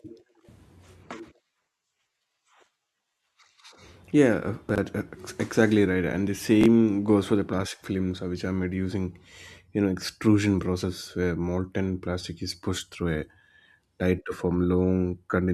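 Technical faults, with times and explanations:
4.69 to 4.78 s, chunks out of order: a 21.33 ms chunk plays three chunks late, so the sound jumbles briefly at the hard joins.
6.61 to 6.66 s, chunks out of order: a chunk lands one chunk late just before "goes for the plastic", giving a quick scrambled moment.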